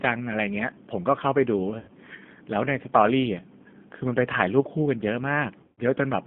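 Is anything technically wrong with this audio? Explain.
Yes. The whole clip is coded with G.729 at 8 kbit/s, and there are two dropouts where VoIP packet loss was concealed by the speech codec.

The G.729 codec coding is plainly audible throughout. The speech is rebuilt from a vocal tract filter, a pitch predictor and a sparse pulse excitation, which gives it a rough, slightly synthetic texture. The band runs from about 150 Hz to 3.5 kHz, so it sounds thin and telephone-like.

The VoIP packet loss occurs from 1.79 to 1.91 s, covering about 90 ms of lost audio, and from 5.63 to 5.80 s, covering about 150 ms. In each gap the decoder repeats its last pitch and filter at falling gain, smearing the sound into a fading buzzy tone or coloured noise. The recovery afterward sounds weak or distorted.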